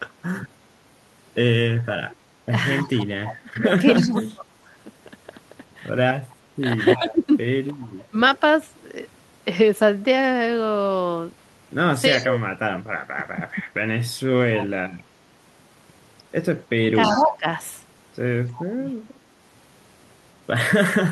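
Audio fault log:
2.83–8.16 s, 12.1–13.6 s and 16.93 s to the end: speech suppressed in double talk. The talker's level dips by up to about 30 dB (about 25 dB in the last stretch), thinning and dropping out in pieces. The likely cause is the echo canceller turning down both its own talker and the loudspeaker echo while both sides talk at once.
2.86–7.13 s and 12.17–19.18 s: echo leak. A delayed copy of the voice trails it by 318 ms, sitting about 15 dB below the speech. This is likely far-end loudspeaker pickup that the echo canceller failed to remove, passed back over the Opus call path.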